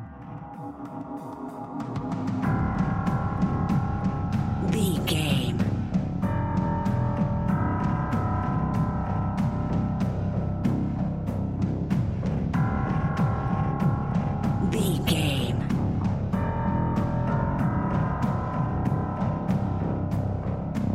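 No audible technical faults.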